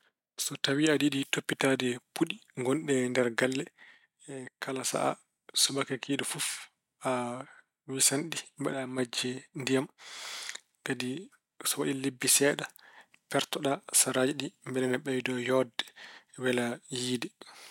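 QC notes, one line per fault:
3.95–4.92 s and 8.73–8.98 s, one channel drops out: the likely cause is one side of a stereo feed going dead for about a second and then for about a quarter second, while the other side keeps running. Because both sides carried the same speech, folding to mono leaves only half the signal, so the level falls abruptly by about 6 dB with no change in tone, then returns just as suddenly when the channel comes back.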